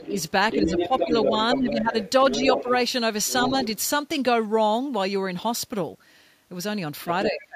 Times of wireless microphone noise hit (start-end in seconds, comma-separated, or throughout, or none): none